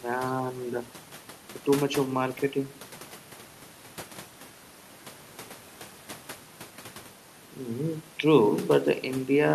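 No technical faults can be heard in the speech, and the only thing beneath it is the room's own background noise, sitting about 23 dB below the voice as part of the recording itself.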